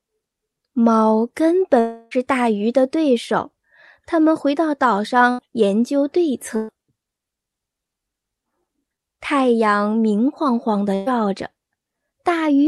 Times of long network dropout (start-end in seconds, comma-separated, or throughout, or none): 1.79-2.13